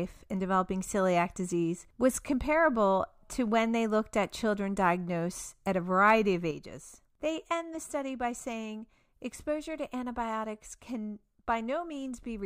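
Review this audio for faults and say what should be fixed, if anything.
At 6.51 s the speech falls abruptly by about 6 dB and stays down to the end. The likely cause is that one channel drops out before the mono sum. Unlike a fade or gain ride, the step is instant, with no ramp, and halves the shared signal. To prevent it, secure both channel connections and meter each side separately before summing to mono.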